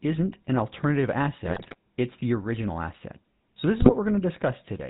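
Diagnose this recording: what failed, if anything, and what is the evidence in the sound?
The codec stage failed. Throughout, the speech has a buzzy, gravelly roughness and nothing above 4 kHz, the signature of the GSM full-rate codec, which fits 13 kbps. It models the vocal tract and drives it with sparse regular pulses. A plain telephone band-limit would sound dull but clean, not buzzy.

The radio link failed with GSM bit errors, from 1.44 to 1.75 s, between "an alternative" and "it's the original asset", and again from 3.78 to 3.92 s. Corrupted filter, pitch and gain values make the decoder squawk, gargle and jump in level. Packet-loss concealment would mute or repeat frames instead.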